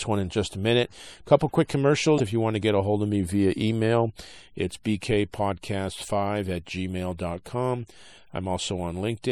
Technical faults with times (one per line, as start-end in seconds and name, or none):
0.00-9.31 MP3 compression
2.16-2.20 damaged data in a compressed stream